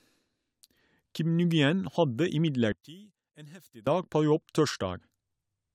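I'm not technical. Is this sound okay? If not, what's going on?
No. From about 2.72 to 3.87 seconds the speech suddenly drops to a faint trace and then returns to normal. The likely cause is one channel inverted: one side of the stereo signal is flipped upside down, so when the two sides are combined, the parts they share cancel each other out. The centred voice mostly disappears, leaving only the small differences between the two sides.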